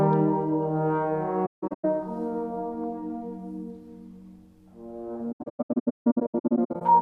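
Around 1.46 to 1.85 s you get AAC frame loss with muting: about 320 ms of audio drops out in patches spread over roughly 0.38 s, the longest gap around 150 ms. The decoder zeroed the missing frames, so the overlapping windows fade the sound down and back up at each edge, giving soft-edged holes. The same thing comes back from 5.32 to 6.82 s, worse this time, with about 1.02 s gone across that stretch and runs again around 150 ms.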